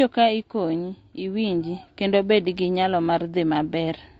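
The speech has most likely passed through low-delay AAC compression such as AAC-ELD, at a rate that fits roughly 32 kbps. At this low bitrate it is coded coarsely, so throughout, the voice sounds plainly rough and grainy, with noise between harmonics and a thinned, synthetic-sounding top band.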